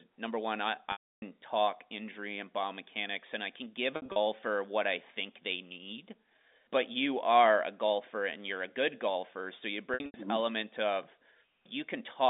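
Speech over a telephone-band line has held, buzzy stutters fading briefly to silence at 0.92–1.22 s (after "number one I"), 3.96–4.16 s (after "and I can give") and 9.94–10.14 s. Packet loss with pitch repetition causes them: the receiver repeats the last pitch period to bridge the lost stretches of 300, 120 and 160 ms.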